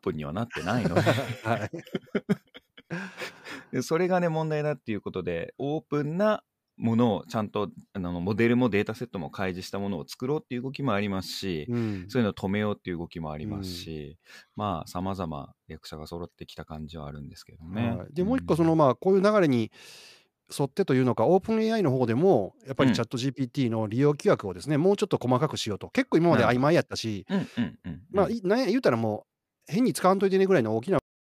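At 30.99 s the speech hits a cut-off end: final buffers never reached output, so sound stops mid-utterance into abrupt digital silence, unlike a fade, with no natural decay.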